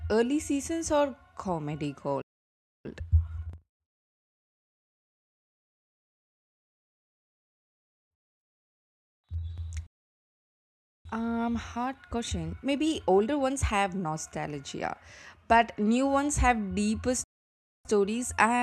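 Playback stalls cut the speech to silence three times: at 2.22 s, just after "early seasons are comedy", for about 0.63 s; at 9.87 s for about 1.18 s; and at 17.24 s, after "new ones have deeper", for about 0.61 s. Each time the sound halts mid-flow and resumes where it left off. The likely cause is the player running short of buffered data or its audio thread being blocked.

Time-compressed catch-up follows each gap, from 2.85 to 5.37 s and 11.05 to 14.05 s at 1.25 times normal speed, and from 17.85 s to the end at 1.1 times. The player clears its backlog by dropping small slices and cross-fading the joins, so the speech sounds hurried but keeps its pitch.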